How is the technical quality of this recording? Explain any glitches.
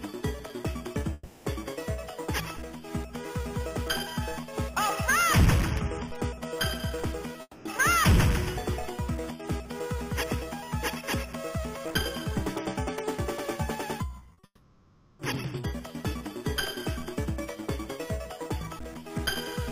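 The recording has several network glitches: three dropouts and one burst of choppy loss.

Long network dropout, at 1.13 to 1.47 s, 7.41 to 7.67 s and 14.45 to 15.21 s. The audio stops and the last sound is stretched into a fading buzz, likely because the stream stopped arriving and the receiver papered over the gap. About 320 ms, 240 ms and 740 ms are lost, with brief silences of about 30 ms and 50 ms before the second and third returns. The sound resumes with that material missing.

Repeated packet loss (robotic sound), at 14.19 to 14.45 s, just before the final dropout. Short holes follow one another closely, the longest about 40 ms. Each is filled by repeating what came just before, so nearly half of this stretch is patched-in sound. It comes across as choppy, with fragments missing, and then runs straight into the long gap.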